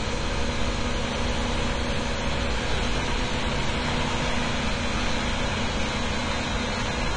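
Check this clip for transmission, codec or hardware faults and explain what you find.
One fault runs through the whole clip: AAC compression. Nothing sounds above 9.6 kHz, so the top is dull. Sustained parts warble and fizz, and detail smears. The likely cause is AAC-LC coding starved of bits, which fits a bitrate around 32 kbps.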